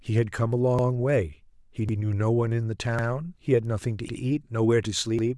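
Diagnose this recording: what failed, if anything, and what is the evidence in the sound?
Overlapping chunks at the buffer stage: a 100 ms stretch of speech repeats, heard as a stutter at 0.79, 1.89, 2.99, 4.09 and 5.19 s. Each 1.0 s chunk begins 100 ms before the previous one ended, so every join replays that overlap.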